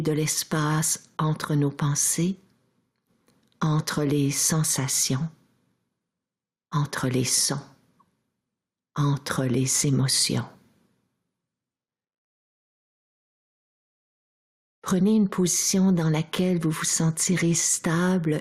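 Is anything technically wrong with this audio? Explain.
Yes. Throughout, there is gain pumping: the level swings by roughly 10 dB, dipping under each loud sound, likely from excessive input gain being clamped by a fast limiter.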